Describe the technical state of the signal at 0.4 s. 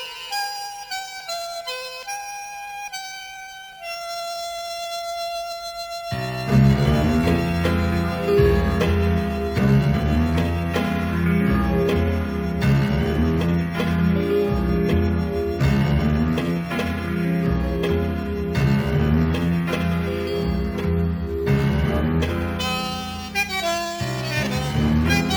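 At 0.4 s the signal carries crude rate conversion, present across the whole clip rather than starting there. The sample rate was raised without filtering by repeating the nearest sample, which fits a 32 kHz to 44.1 kHz jump. The resulting error, roughly 25 dB below the signal, is a gritty, inharmonic fizz riding on louder and brighter sound. A spectrogram shows faint mirrored, non-harmonic lines beside real components, and zooming the waveform reveals small stair-step repeats.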